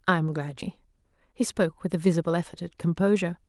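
Right at 0.61 s there's a skip ahead: playback jumps straight over a chunk of the speech, roughly 0.7 s of it, with basically no gap or fill where the join is. Sounds like the jitter buffer overflowed and dumped a stretch while newer audio was already queued, so the two sides get butted together and the delay drops by about the same amount. You hear it as an abrupt splice mid-flow.

Then from 0.87 s right through to the end, the jitter buffer speed-up kicks in. The buffer was still holding more than it wanted, so it kept snipping out tiny pitch-period-sized slivers, adding up to around a third of a second. The result is speech running at about 109% speed with the pitch unchanged, so it comes across slightly rushed and clipped, all heard through a call codec whose top end stops near 12 kHz.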